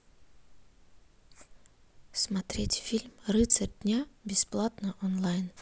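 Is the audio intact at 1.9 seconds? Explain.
Yes, the speech at 1.9 seconds plays through intact, with no audible fault at that moment.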